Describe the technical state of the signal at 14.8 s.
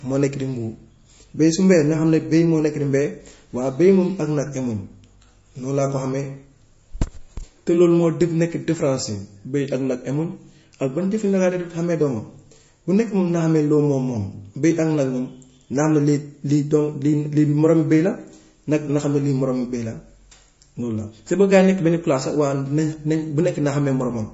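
At 14.8 s the speech sounds watery and swirly, with metallic chirps on s sounds, smeared attacks and nothing above 7.6 kHz. This is likely MP3 compression, present throughout the clip, where a starved encoder cuts the treble and lets weak frequency lines flicker between frames, which fits roughly 32 kbps.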